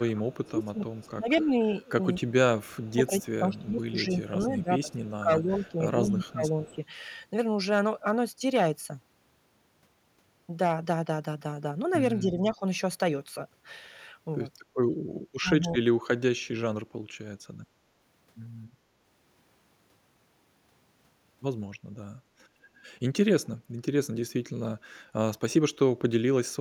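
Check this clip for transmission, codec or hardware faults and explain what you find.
Two echo-canceller faults affect the clip's speech.

Speech suppressed in double talk: from 0.0 to 6.8 s the speech ducks by about 20 dB, then briefly at 12.21 to 12.62 s (about 10 dB) and 15.38 to 15.80 s (about 30 dB). The likely cause is the canceller attenuating the talker while both sides speak.

Echo leak: faint delayed copies, about 30 dB down, trail the speech by 240 ms at 0.44 to 1.11, 2.81 to 3.87 and 4.91 to 5.72 s, and rise to about 25 dB down at 6.28 to 6.76 s. This is likely far-end loudspeaker pickup the canceller failed to remove.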